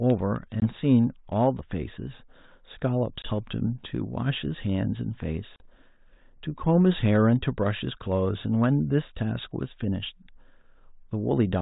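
Speech, with packet loss on an ADPCM call at 0.6, 3.22 and 5.56 s. Silent holes of 20, 20 and 40 ms knock the decoder's predictor out of step, so the audio resumes with brief distortion.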